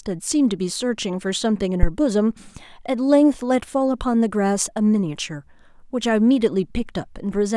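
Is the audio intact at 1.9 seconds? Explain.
No. A phantom power thump runs from 1.83 to 1.92 s: a supply switched on or off on the live input sends a step through the coupling capacitors, giving a deep thump peaking near about -2 dBFS and dying away within 20 ms.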